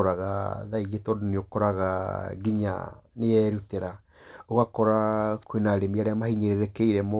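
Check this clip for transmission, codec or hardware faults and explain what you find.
No faults to report here; the speech just carries the narrow telephone-band sound of a normal call path, with nothing above 4 kHz, which fits ordinary G.711 mu-law coding doing its usual job.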